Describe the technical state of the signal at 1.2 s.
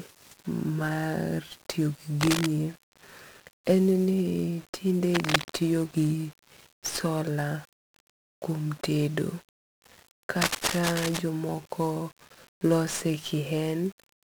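At 1.2 s the speech is carried through 1-bit DFPWM compression, which runs through the whole clip rather than starting or stopping there. Each sample is reduced to a single up-or-down step on an adaptive level, so the waveform tracks the speech as a jagged staircase, heavily damaged, with a density that fits roughly 48 kbps. It sounds fuzzy and crackly, treble drowned in hiss. A spectrogram shows a broadband noise floor smeared across all frequencies, burying the upper harmonics.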